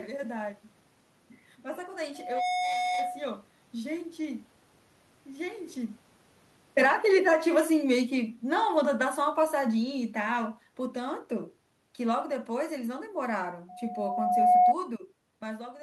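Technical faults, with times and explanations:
2.14–3.32 s, loudspeaker feedback squeal: a steady 727 Hz tone swells out of the speech over about a third of a second and settles roughly 5 dB above it. The microphone was picking up its own loudspeaker, and at that one frequency the loop gain passed unity, so the tone fed itself. A spectrogram shows a single bright horizontal line at 727 Hz. On the waveform the envelope swells into a dense, regular oscillation.
6.62–11.24 s, automatic gain falling: over these four and a half seconds the level slides down by about 10 dB. The room noise sinks with the speech, which shows the change happened in the gain stage and not at the source. The automatic gain control judged the input too loud, or its background noise too strong for its starting gain, and eased its gain back gradually. On a waveform the envelope tapers smoothly. A spectrogram dims evenly across all frequencies, with no change in spectral shape.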